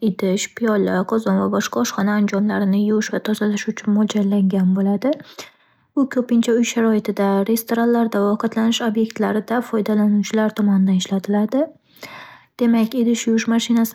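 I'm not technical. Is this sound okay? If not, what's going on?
Yes, nothing wrong can be heard in this recording.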